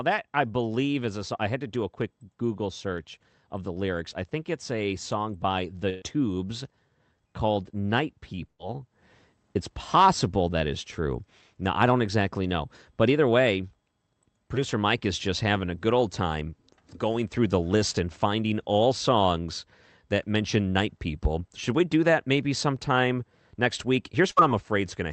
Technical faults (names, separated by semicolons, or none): burst of packet loss